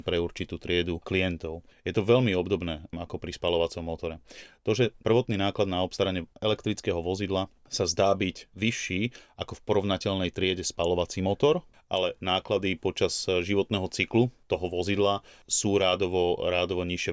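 Speech recording with no technical fault to report. There is nothing here that calls for a time or a cause.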